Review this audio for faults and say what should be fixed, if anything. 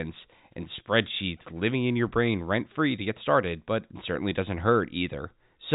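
Packet loss with pitch repetition at 0.76 to 0.78 s: roughly 20 ms of speech was lost, consistent with two dropped packets, and the receiver bridged it by repeating the last pitch period, producing a brief held, buzzy sound. Adding forward error correction or redundant packets would prevent it.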